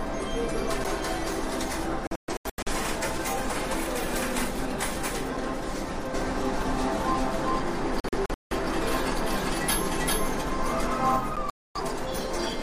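Three brief ticks with a near-instant mute of a few milliseconds, at 0.84, 5.37 and 11.36 s, are each followed by the audio resuming from a different point. These are CD skips: the laser jumped to another turn of the disc spiral, and playback carried on from that position. Between 2.07 and 2.72 s the sound breaks into several short silent holes, about 384 ms lost in all and the longest about 128 ms. Between 8.00 and 8.55 s about 299 ms goes missing, the longest hole about 171 ms, and from 11.50 to 11.81 s about 256 ms drops out. This is a digital broadcast dropout: the receiver lost frames or rejected corrupt ones, which fits several lost frames each time, and muted until clean data returned, so that material is gone. From 6.14 to 11.16 s a doubled audio track runs underneath, a full-band copy at roughly the same level trailing about 400 ms behind with no reverberant tail, starting and stopping abruptly. 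It is likely a second capture of the same source through a slower path.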